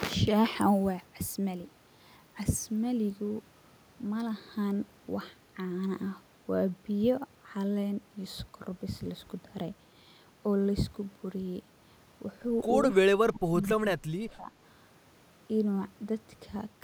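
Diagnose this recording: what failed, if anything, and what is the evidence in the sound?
Speech suppressed in double talk, at 12.92 to 13.84 s and again at 14.0 to 14.51 s, in the call-processing stage: the speech sinks by roughly 30 dB and then about 25 dB, likely because the echo canceller could not separate this side's talker from the far end's loudspeaker echo during overlapping talk and attenuated everything.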